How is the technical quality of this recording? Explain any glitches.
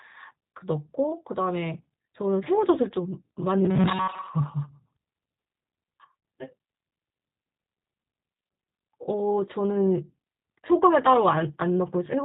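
The recording has clearly audible technical damage: a low-bandwidth coded sound throughout, plus two brief glitches in the middle and later part of the speech.

Across the whole clip the speech sounds rough, slightly synthetic and dull, with nothing above 4 kHz. That is the G.729 codec at 8 kbit/s. It rebuilds each 10 ms frame from a vocal tract filter, a pitch predictor and a few pulses, discarding fine detail.

From 6.20 to 6.23 s, the speech briefly smears into a buzzy tone or coloured noise that fades, for about 30 ms. This is VoIP packet loss concealed by the speech codec, which fits a single lost packet. The decoder extrapolated from its last pitch and filter settings while lowering the gain.

Between 8.35 and 8.94 s, the voice turns into a rigid, metallic buzz at a fixed 188 Hz while still roughly following the speech, with most of the real audio replaced. This is robotic sound from repeated short buffers, likely caused by the software looping roughly 5 ms chunks when fresh audio arrived too slowly.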